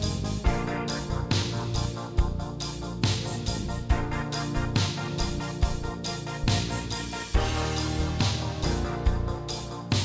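From start to finish the sound is slowed and lowered together, running at about two-thirds speed and sitting roughly seven semitones flat. This is a wrong sample rate fault: the samples were played back without conversion, which fits 24 kHz material played at 16 kHz.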